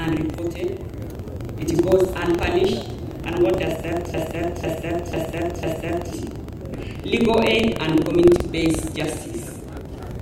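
A low robotic rattle at about 23.4 Hz runs through the whole clip wherever there is signal. This is buffer tearing: the writer and reader of the audio buffer have slipped, so a small slice of each period carries sound roughly a tenth of a second old, with hard joins, at a rate that fits a 2048-sample buffer. From 4.14 s to 6.13 s, a half-second fragment (about 0.50 s) repeats four times back to back, a broken-record loop, and whatever should have played there is gone. The likely cause is a stalled player, encoder or stream that kept resending its last held chunk.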